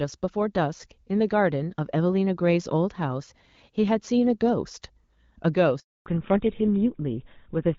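At 5.80 s the speech cuts out for 0.26 s, until 6.06 s. This is a handover gap. The call is passed between networks, and no speech frames arrive during the switch. The sound dies away quickly, and whatever was said in that stretch is lost.

From 6.06 s to the end, the call falls back to narrowband. Before the gap, the wideband sound fits AMR-WB at about 12.65 kbit/s, with only light coding roughness. Afterwards nothing above 4 kHz remains. The speech turns duller and rougher, which points to an older codec such as GSM full rate.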